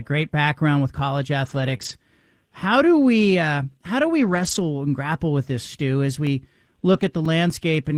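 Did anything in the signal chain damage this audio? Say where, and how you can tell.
Yes. At the network stage, lost packets were rebuilt from error correction at 1.45 to 1.75 s, 1.81 to 1.91 s, 4.19 to 4.61 s and 6.93 to 7.07 s. Each sounds rough and noisy rather than silent, since low-bitrate redundant copies stood in.

Just after "great background with college", a short concealed packet loss at 1.77 to 1.81 s leaves a brief smear where the decoder extended the last sound to fill the missing 20 ms. On the waveform it reads as a filled-in stretch blending back in.

From storage, CD scratch ticks recur between 6.27 and 7.75 s, seven in all, the longest only a few milliseconds. Each is an uncorrectable burst the player interpolated or muted, visible as thin vertical lines on a spectrogram and tiny notches in the waveform.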